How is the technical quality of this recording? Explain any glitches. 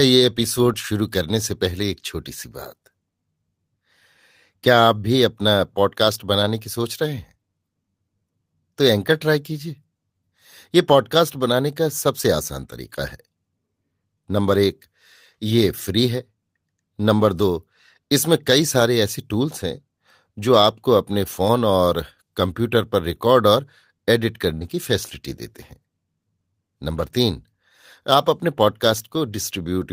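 The recording has one audible glitch, a burst of packet loss in the speech at about 24.54 to 24.64 s. Several consecutive packets never arrived in time. The receiver covered the gap by continuing the last sound for roughly 64 ms, fading it as it went, so a voiced sound turns into a brief held buzz. About 60 ms of speech is simply gone when playback resumes. On a spectrogram this appears as frozen, smeared harmonics that dim, followed by an abrupt jump. In the waveform the envelope tapers before the stream restarts.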